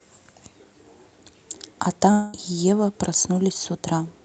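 At 2.11 s the speech breaks off for about a quarter second, until 2.35 s, and what fills it is a fading buzzy smear of the last sound rather than silence. That's likely a long network dropout, with concealment papering over roughly 220 ms of lost audio.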